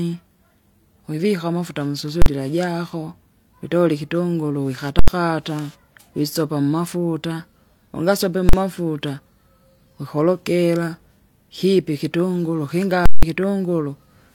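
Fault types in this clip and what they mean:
Invalid numbers at full scale: at 2.22, 4.99, 8.49 and 13.06 s, a calculation produced infinite or invalid values, which were clamped to full scale for a whole block. The 43 and 85 ms blocks land as single bangs. The 171 ms one gives a pop, silence, then another pop.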